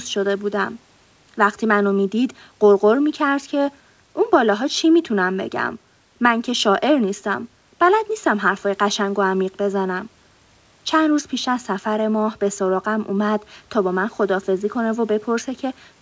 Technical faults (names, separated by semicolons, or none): none